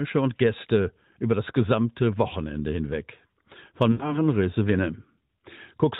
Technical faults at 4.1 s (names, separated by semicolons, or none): lost AMR speech frames